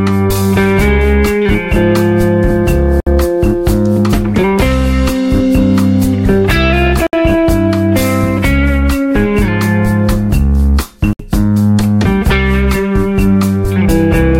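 Brief silences of about 65 ms cut into continuous sound at 3.00–3.07 s, 7.07–7.13 s and 11.13–11.19 s, four seconds apart, with smeared edges before the sound resumes where it stopped. These are gaps at joins of encoded pieces: separately encoded 4-second segments were concatenated with each run's start delay and end padding left untrimmed.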